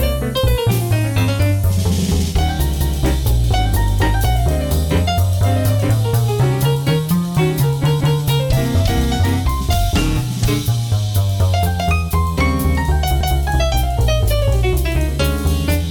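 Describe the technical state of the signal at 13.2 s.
At 13.21 to 13.41 s there's an overlapping-chunks fault: a new 5-second chunk starts early, so about 200 ms of sound plays twice, giving a brief stutter.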